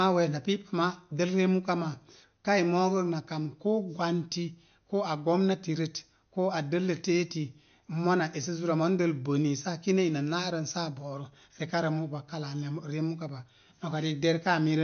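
From start to finish the speech sounds dull and watery, with nothing above about 6.5 kHz and a swirling, metallic edge on s sounds. This is likely MP3 compression at a low bitrate, near 48 kbps, with the encoder cutting the treble and dropping weak detail frame by frame.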